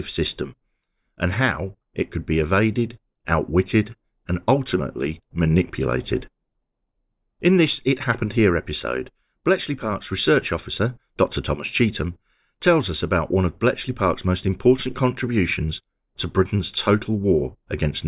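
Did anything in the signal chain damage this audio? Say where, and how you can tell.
No, nothing damaged this audio.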